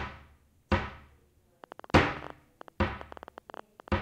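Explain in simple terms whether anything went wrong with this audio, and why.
A train of clicks runs from 1.64 to 3.99 seconds. About thirty uneven ticks, twelve a second. Likely interference, a bad connection or power supply.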